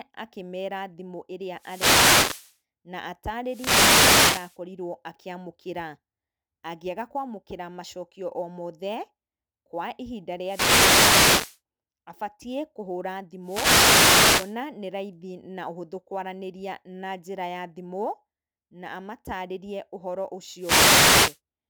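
A speech recording carrying sample clock jitter throughout: the converter's clock wanders by a few microseconds, so steep waveform slopes are sampled at the wrong moment, leaving a roughness roughly 20 dB below the voice that swells on loud, bright syllables and disappears in pauses. On a spectrogram this shows as a haze of broadband noise that tracks the speech energy. Wireless microphone noise hits occur at 1.54–2.57 s, 3.45–4.58 s, 10.42–11.60 s (just before "abatiĩ kũhũra"), 13.42–14.58 s (just after "abatiĩ kũhũra") and 20.57–21.39 s (after "na amatarĩrie ũhoro"). Each is a swish of static as the FM signal fades and receiver noise rises, seen as vertical broadband smears.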